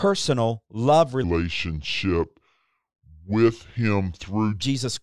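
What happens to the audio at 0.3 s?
Nothing goes wrong at 0.3 s; the speech there comes through intact, with no dropout, click or distortion.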